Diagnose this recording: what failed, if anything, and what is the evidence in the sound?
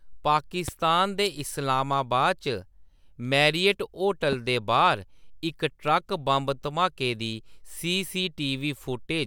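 A single loud pop lands at 0.68 to 0.71 s, one sharp hit roughly 10 dB above the speech, which carries straight on underneath without a gap or a change in level. That points to the analogue side, most likely a plug, switch or static discharge putting a brief voltage step into the line. The following circuitry shaped that step into a short pulse, which is why it reads as a crisp pop.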